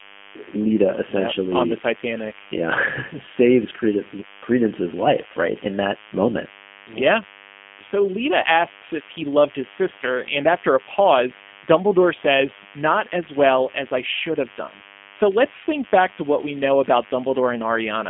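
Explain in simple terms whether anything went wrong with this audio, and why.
Yes, two things went wrong, and both last the whole recording.

First, a DECT cordless phone buzz sits underneath the speech from start to finish. A cordless phone or its base station nearby sends short radio bursts a hundred times a second, and the recording circuit turns those bursts into sound: a thin, steady 100 Hz buzz, quieter than the speech but never gone. Unlike ordinary mains hum, which is a smooth, round drone, this one sounds edgy and rasping because it is rich in harmonics.

Second, the speech has passed through the G.729 codec, a low-bandwidth internet-phone codec. Instead of sending the actual sound, it sends a rough description of how the mouth and voice are shaping it, and the far end rebuilds the speech from that. Nothing above about 3.5 kHz survives, so the speech sounds boxed in like a phone line. 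What sets it apart from a simple phone-line filter is the added damage: the speech comes out slightly rough, grainy and artificial.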